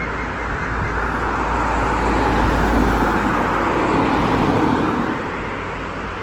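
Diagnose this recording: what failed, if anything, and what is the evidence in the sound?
Throughout the clip, tonal parts turn grainy and rough, with noise where clean detail should be, though the top end still reaches about 20.2 kHz. The codec stage is at fault: likely Opus compression in CELT mode, filling bit-starved bands with noise, consistent with roughly 16 kbps.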